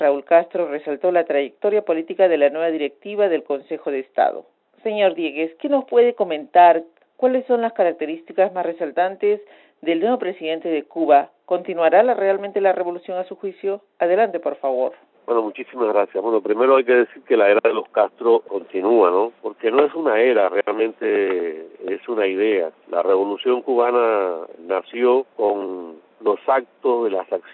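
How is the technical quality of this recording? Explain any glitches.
No glitches or technical faults can be heard anywhere in the recording. It has gone through a call's microphone processing, so the lowest bass is trimmed and nothing reaches above 8 kHz, which is expected for that path.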